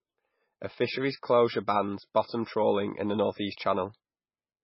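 From start to finish the speech carries heavy damage of the kind MP3 compression leaves, most likely from encoding at a very low bitrate around 16 kbps. Everything above 5.5 kHz is gone, so the sound is dull and the s sounds lose their edge. It sounds watery and swirling, with smeared attacks. On a spectrogram there is a flat ceiling at 5.5 kHz, and below it the energy breaks into patches that flicker on and off between frames.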